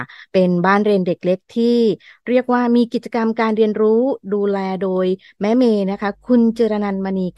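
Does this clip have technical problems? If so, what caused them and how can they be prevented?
Yes. Mains hum from 5.91 s to the end: a ground loop or nearby transformer couples a steady 50 Hz tone, well below the speech, into the signal. Breaking the ground loop or moving cables away from power supplies prevents it.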